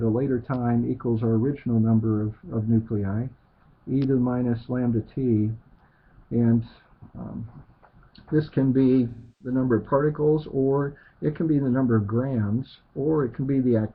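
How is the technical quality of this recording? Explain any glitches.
There is one glitch: AAC frame loss with concealment from 9.10 to 9.55 s. The sound smears into a noisy, phasey blur, then recovers. The decoder lost about 0.3 s of data, roughly seven frames, and filled the gap by reusing the last good spectrum with scrambled signs or interpolated energy.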